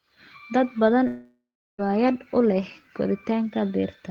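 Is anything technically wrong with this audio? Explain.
Yes. From 1.07 s to 1.80 s the speech cuts out in what is likely a long network dropout. The final sound before the gap is drawn out into a buzz that fades, and about 350 ms of near silence follows. Speech then resumes with about 720 ms simply missing rather than delayed. A short packet loss would leave only a brief glitch. Here the fill runs out and decays into silence, which points to a sustained outage.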